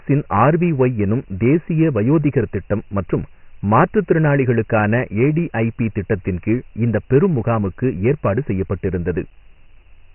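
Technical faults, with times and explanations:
Throughout, Dialogic VOX ADPCM: nothing above 3 kHz and heavy gritty hiss trailing the speech, which fits 4-bit OKI ADPCM at about 24 kbps and 6,000 samples a second.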